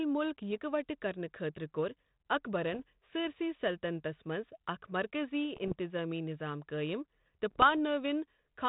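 Speech carried over a narrowband ADPCM link with light coding grain is hit by bit errors on an ADPCM link at 0.51–0.58, 2.73–2.80, 5.57–5.74 and 7.51–7.69 s. These come through as pops and rough bursts with brief level jumps, because each flipped bit throws off the decoder's adaptive step size and predictor, and the damage rings on briefly. Unlike packet loss, the sound never drops out or repeats.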